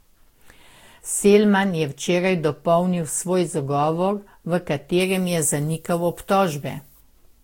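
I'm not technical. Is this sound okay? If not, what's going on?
No, not quite. All the way through, the speech sounds swirly, smeared and a bit hollow, with the starts of sounds blurred. That's generation loss, most likely from being squeezed with lossy compression, then unpacked and squeezed again about five times, with damage piling up each round.

From 5.00 to 7.00 s, right after "dopolnil svoj zagovor v", the sound turns thin, harsh and hissy on the s-sounds. That's pre-emphasis left on: the treble was boosted for transmission, and the matching cut that should undo it never happened.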